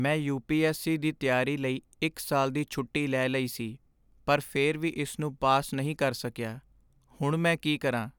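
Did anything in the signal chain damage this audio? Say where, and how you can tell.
No, nothing in the signal chain has left an audible mark on this speech recording. There is no stage I can point to where the sound has been damaged.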